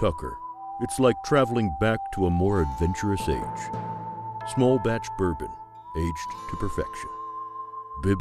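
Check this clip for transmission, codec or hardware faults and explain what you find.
No faults found; nothing audible warrants further investigation.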